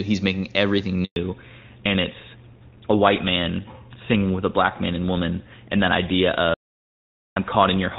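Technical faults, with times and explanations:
1.04–1.16 s, handover gap: the speech fades out within a few tens of milliseconds and stays silent for 120 ms while the call is passed to another network and no speech frames arrive. Unlike a dropout to hard zeros, the sound tails away rather than snapping off. The gap is short and sits exactly where the audio bandwidth changes, which points to a network switch rather than a failing input. Whatever was said in those 120 ms is gone.
1.16–7.99 s, fallback to narrowband: after the handover the call leaves AMR-WB HD Voice at 23.85 kbit/s, which until then carried clear, full-bodied speech, and continues on GSM full rate at 13 kbit/s. Nothing above 4 kHz survives, so sibilants and crisp consonants lose their edge and the voice turns dull and somewhat rough. A low-pass filter would also dull the top, but here the change arrives abruptly at the handover point with codec coarseness added.
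6.54–7.36 s, audio dropout to silence: the speech cuts off mid-flow for about 818 ms and the gap is digital silence, with no room tone and no codec comfort noise. The abrupt edges and total emptiness separate it from the faded handover gap earlier. The likely cause is a lost input or a stray mute, with the encoder writing silence until the signal returned. Anything spoken in that stretch is missing.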